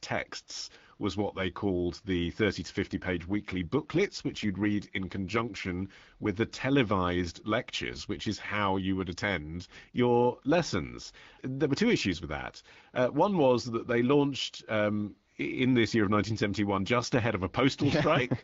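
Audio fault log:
2.91–5.74 s and 17.73–18.44 s, AMR rate drop: up to "with the televised lectures" and after "just ahead of", speech turns rougher and more synthetic with no gap or band loss, fitting a drop from 12.65 to 8.85 kbit/s.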